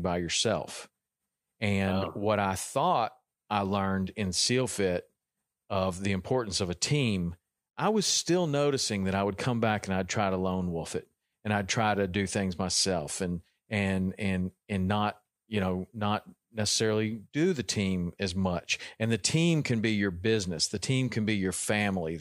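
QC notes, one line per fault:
No faults found on listening; nothing to log for this speech clip.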